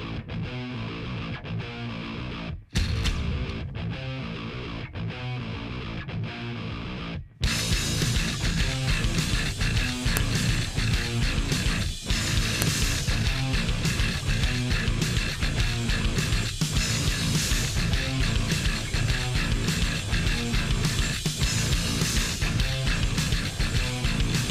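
A sharp, loud snap cuts into the audio at 10.17 s and again at 12.62 s, each lasting about a millisecond: a file header played as audio. Separate WAV pieces were joined without their headers stripped, so those few dozen bytes of file metadata play back as samples. On a waveform each appears as a lone sharp spike; a spectrogram shows a thin vertical line spanning the whole frequency range at both times.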